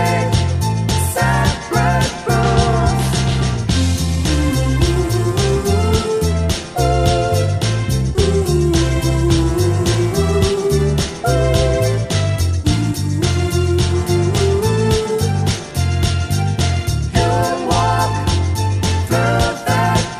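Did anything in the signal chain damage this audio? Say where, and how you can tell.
No, nothing I can hear points to trouble anywhere along the chain, so there's no stage to single out here.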